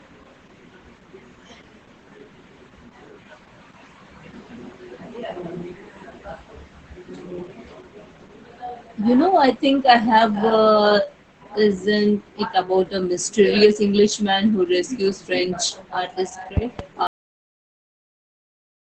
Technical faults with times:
0.00-18.83 Opus voice compression
16.57-16.82 loud pop
17.07-18.83 cut-off end

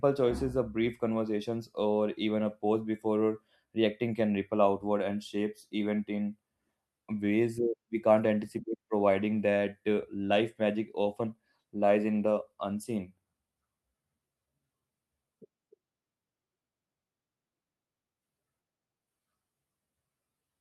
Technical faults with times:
7.10-13.07 call bitrate drop

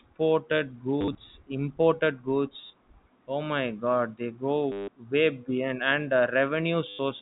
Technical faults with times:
1.01-1.15 packet loss with last packet repeated
2.61-2.73 packet loss with last packet repeated
4.72-4.88 packet loss with last packet repeated
6.89-6.99 packet loss with last packet repeated

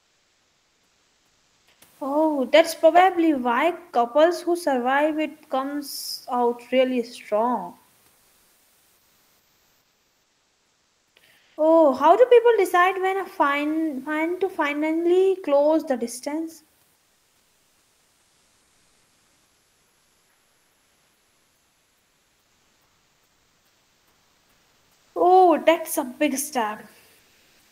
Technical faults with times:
0.00-1.81 comfort noise in place of the background
11.41-11.53 comfort noise in place of the background
16.99-25.15 comfort noise in place of the background
27.19-27.71 comfort noise in place of the background

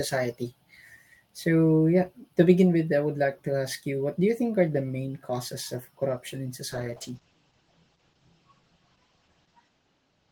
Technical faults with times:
6.73-10.31 call bitrate drop

